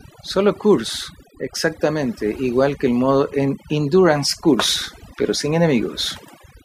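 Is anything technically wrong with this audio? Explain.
Yes. Throughout the speech there is overdone noise removal. A noise reducer set far too aggressively keeps pulling individual frequency bands down whenever their level sits close to its noise estimate, so the background collapses into near silence scattered with twinkling specks, and softer parts of the voice are swallowed too. Unlike a low-pass filter's steady dullness, the loss here flickers band by band from moment to moment.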